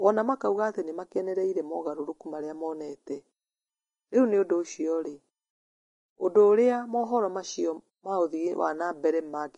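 Speech that sounds hissy and grainy from start to finish, with rough, smeared treble and nothing above about 10.6 kHz. The likely cause is heavy Vorbis compression, which fits a low bitrate of roughly 27 kbps, with the top end turned to coarse noise.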